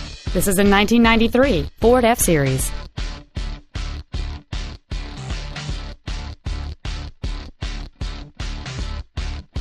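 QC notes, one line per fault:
No faults detected.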